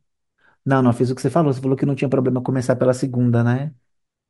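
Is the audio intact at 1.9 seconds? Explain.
Yes, the speech plays through cleanly at 1.9 seconds with no dropout, click, distortion or other fault at that moment.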